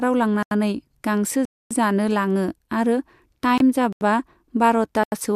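Blocks of digital silence at 0.43 to 0.51 s and 1.45 to 1.71 s cut the speech out with no fade. The output buffer likely went unfilled, so each 85 ms gap (fitting a 4096-sample buffer) and the 256 ms gap sounds like a short hole. A digital broadcast dropout at 3.58 to 3.61 s mutes the speech for 24 ms, which points to a single lost frame. The receiver silenced output until good data returned, leaving a brief gap. The same 85 ms blocks of silence recur at 3.93 to 4.01 s and 5.04 to 5.12 s.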